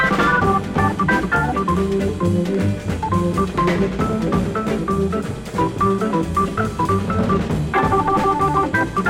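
DAB burbling appears twice. Weak reception let residual bit errors, a fraction of a percent, slip past error correction into the MP2 audio data. Corrupted samples put short noise blips into single sub-bands, and corrupted scale factors throw sub-bands up or down in level for up to a frame. At 0.77 s this is a brief burble. From 3.92 to 4.13 s it becomes a longer burble, which fits about eleven damaged frames.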